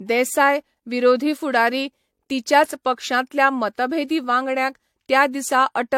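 From start to end, the speech carries two kinds of codec artefact at once. Nothing is heard above 16.5 kHz. The earlier codec's artefacts sit alongside those the later one adds. This points to transcoding between lossy codecs, likely an HE-AAC stage re-encoded as AAC-LC.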